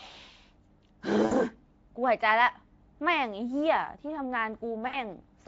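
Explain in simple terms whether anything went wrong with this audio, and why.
Chunks of the speech stream went missing twice, at 1.25–1.33 s and 4.87–4.98 s, and the codec guessed to fill each 60 ms gap (VoIP packet loss concealed by the speech codec), leaving brief buzzy, fading smears.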